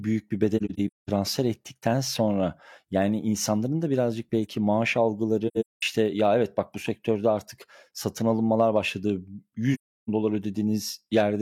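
At 0.57 to 1.10 s, just after "büyük bir", AAC frame loss with muting punches soft-edged holes in the speech. Roughly a third of a second is zeroed, scattered across half a second, with the longest silence around 0.2 s. The overlapping windows fade each gap out and back in. The same happens at 5.47 to 5.82 s after "da birazcık belki maaş" and at 9.74 to 10.09 s.

Hard clipping flattens the peaks at 1.87 to 1.89 s, 6.01 to 6.59 s before "bak bu", 8.30 to 8.77 s and 11.17 to 11.20 s. It is overdriven by only about 1 to 2 dB, so it is heard as brief crackle on loud syllables rather than continuous fuzz. The flat-topped waveform adds high harmonics, which are not the smeared, swirly artefacts of a codec.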